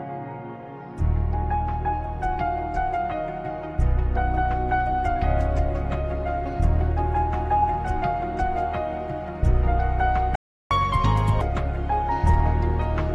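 The player appears to have run dry of data, or had its output thread blocked, which is the likely cause of a playback stall at 10.35 s. For about 0.35 s, until 10.71 s, the output goes completely silent, cutting the sound off mid-flow. Right after recovery the player resamples its backlog to recover the lost time, producing catch-up at higher speed from 10.71 to 11.41 s. Playback runs at 1.5 times normal speed, so tempo quickens and pitch climbs by around seven semitones, giving a brief chipmunk-like lift before both drop back to normal rate.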